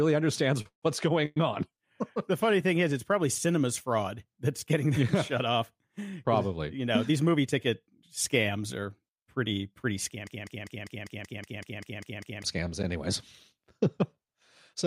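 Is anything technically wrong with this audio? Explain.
Yes, there are several network and playback faults.

At 0.61 s to 0.66 s there is a short stall from a late packet. The jitter buffer ran empty, so the receiver stretched the last sound for about 38 ms, holding it slightly too long.

There are two call audio freezes. From 0.68 s to 0.83 s, packets were likely held up in transit. The receiver filled 142 ms, and the continued sound faded into about 110 ms of silence. From 1.25 s to 1.37 s, likely the same delay caused a 107 ms fill, heard as a fading buzz or hiss with no silent stretch. In both, nothing is lost, but a gap is inserted.

There are two jitter buffer speed-ups. From 7.09 s to 7.99 s, the oversized buffer was trimmed by removing tiny pitch-period slices, roughly 70 ms in total. The speech runs about 7% faster at an unchanged pitch. From 11.14 s to 11.62 s, about 40 ms was cut, giving a similar 6% hurry.

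A broken-record loop runs from 10.27 s to 12.44 s, right after "pretty pretty" and before "scams anyways". The stream likely stalled and resent its last fragment. A 199 ms piece repeats 11 times back to back, and the speech that belonged there is lost.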